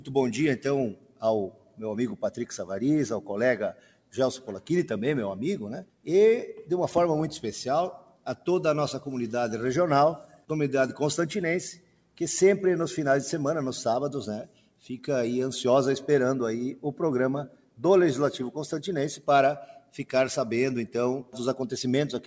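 A speech-oriented noise suppressor has been left running on non-speech audio, so held tones, ambience and decaying tails are treated as noise and pulled down by around 10 dB while attacks pass through. This produces a pumping, thinning texture rather than the even level change of a compressor. The sound cut by the noise suppressor is sharpest, dipping about 12 dB, at 0.93–1.8, 3.73–4.13, 5.84–6.07, 7.99–8.47, 10.23–10.5, 11.74–12.18, 14.46–14.86 and 17.49–17.8 s. Unlike packet-loss dropouts, these are sustained passages sinking in level, not silent gaps. Above 8 kHz nothing remains, which fits a 64 kbps G.722 call codec.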